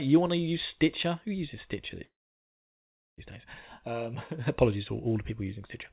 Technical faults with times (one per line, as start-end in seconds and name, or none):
2.04-3.21 call audio freeze